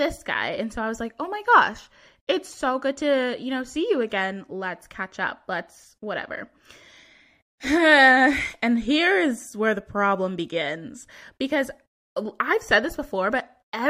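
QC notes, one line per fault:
2.50–2.54 s, damaged data in a compressed stream: a stretch of the encoded speech stream arrived corrupted, so the decoder could not parse the frames it hit and lost sync, skipping forward until it found the next valid frame header. That brief breakdown, lasting roughly 40 ms, comes out as a short chirp, squawk, click or hole cutting into the speech before clean decoding resumed.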